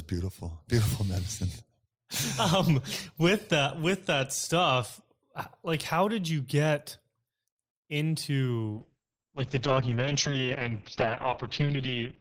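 From 8.72 s to the end, the speech turns muffled, rough and watery. This is a call bitrate drop: the encoder fell from 32 kbps to 7 kbps, coding more coarsely and cutting the audio band from 20 kHz to 6 kHz, with no recovery.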